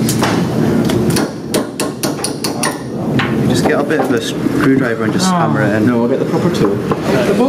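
Gain pumping runs through the whole clip, with a level swing of about 20 dB. The likely cause is input gain set far too high for the microphone, with a fast limiter or compressor clamping down on each peak and releasing in the pauses. Loud and quiet passages sit unnaturally close in level, leaving the audio squashed.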